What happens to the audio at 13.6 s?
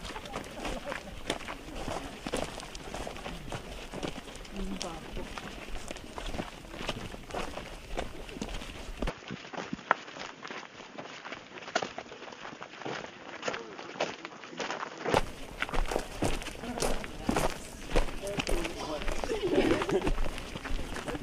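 The input likely switched to a poorer device at 9.1 s, until 15.1 s. At 13.6 s the sound is band-limited to nothing above 7 kHz, so it turns dull and boxy, a little quieter, with faint new background noise and no gap at the switch.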